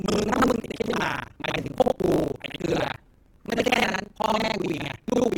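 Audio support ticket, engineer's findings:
Buffer tearing, whole clip: robotic buzz at 25 Hz riding on the speech, only when there's signal. Writer and hardware read pointer have slipped, so about half of each period replays audio from roughly 70 ms earlier, with hard joins both sides. Check the ring buffer pointer handling.

Adaptive stream starting at a low bitrate, 0 to 3.88 s: dull, band-limited speech with heavier codec smearing, then an abrupt jump to full-band audio with no gap. The sound points to roughly an Opus 16 kbit/s start stepping up to about 64 kbit/s once the player had measured the connection.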